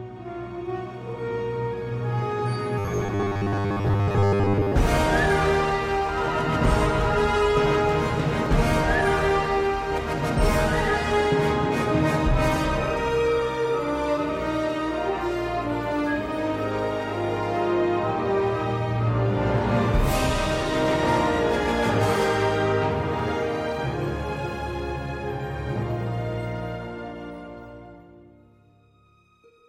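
From 2.79 to 4.73 s the sound turns into a rigid, metallic buzz pitched at 100 Hz, a robotic sound from repeated short buffers. The likely cause is audio arriving too seldom, so playback loops the last 10 ms to fill the gaps while most of the real material, roughly two-thirds or more, is skipped. On a spectrogram this shows as evenly spaced horizontal harmonics at 100 Hz multiples; the waveform repeats an identical 10 ms shape.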